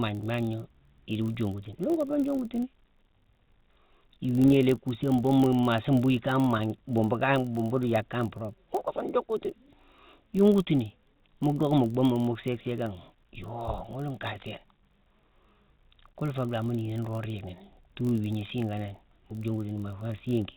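Right through the clip there's a steady buzz at 46.9 Hz from a block size mismatch (padded). Each 1024-sample read gets a zero-filled tail, which drags the speech to 0.999x speed. Underneath, clock drift between sender and receiver is at work, with the sender running roughly 2% slow, so the jitter buffer keeps draining and timing wobbles unevenly. That drift drives repeated timing corrections from 0.1 to 20.1 s. The receiver stretches playback to about 99% speed with small repeated slices, adding around 300 ms overall and giving a faintly unsteady tempo. On top of that come scattered short gaps where late or lost packets were patched by extending the previous sound. There are about seven between 0.21 and 4.78 s, five between 6.58 and 9.30 s, and seven between 13.86 and 19.33 s. Each is only 10 to 15 ms at most, heard as brief ticks or smears. The call path itself cuts everything above 4 kHz, so the speech has that narrowband phone quality throughout.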